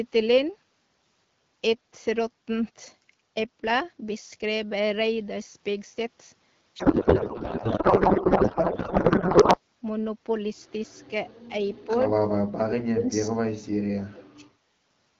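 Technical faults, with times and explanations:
6.79–9.60 s, codec payload misread: The speech turns to garbled noise and warble. This fits octet-aligned AMR frames being unpacked as bandwidth-efficient, so every field is misplaced.
12.35–13.12 s, 13.28–13.38 s, 13.79–14.44 s, speech suppressed in double talk: The speech dips by about 30, 25 and 40 dB. This is likely an echo canceller muting it during simultaneous talk.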